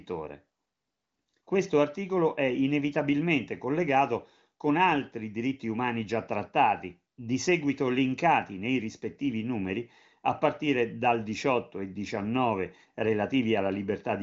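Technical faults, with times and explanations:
No technical faults are present.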